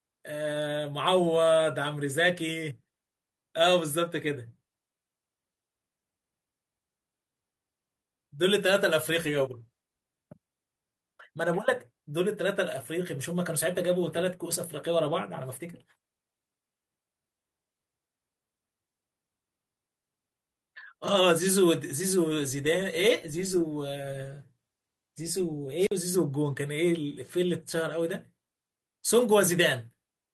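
At 25.78 s the radio link of an analogue FM wireless microphone weakens, and once the carrier falls below the receiver's threshold its squelch cuts the output: a wireless microphone squelch dropout lasting until about 25.92 s. The speech gives way to a short burst of hiss as the signal fades, then a hole of near silence of roughly 49 ms, before the voice comes back as reception recovers.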